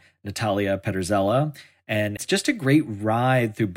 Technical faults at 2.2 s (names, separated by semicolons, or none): CD skip